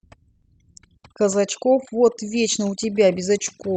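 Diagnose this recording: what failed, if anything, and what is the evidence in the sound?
Overdone noise removal affects the whole clip. The failure sits in the call processing stage. The gaps between phrases drop to near silence, scattered with twinkling specks. A noise suppressor set too aggressively is cutting individual frequency bands whenever they come close to its noise estimate. Quiet parts of the voice fall under that threshold and disappear along with the noise, and the isolated bands that survive produce the specks.

A short stall from a late packet occurs between 0.35 and 0.45 s. This is a network and jitter buffer fault. One sound is held for about 70 ms too long, with a faint buzz or dip. A packet arrived late and the buffer ran dry. The receiver stretched the last audio until the packet came, then resumed from the same point. Nothing is lost, but everything after it plays 70 ms later.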